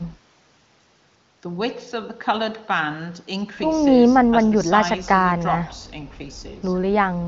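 No technical faults can be heard in this speech, which comes through the AMR wideband (HD Voice) codec at 23.05 kbit/s with nothing above about 7.5 kHz.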